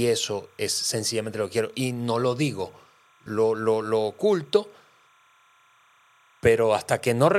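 A faint, steady chirping warble sits behind the speech for the entire clip, flickering between two pitches near 1 kHz and 2 kHz and roughly 35 dB below the voice. This is timecode bleed: linear timecode running at 30 frames per second has leaked into the audio path from an adjacent track or cable. The code's square wave toggles between those two frequencies as it encodes each bit, producing the constant buzzy twitter.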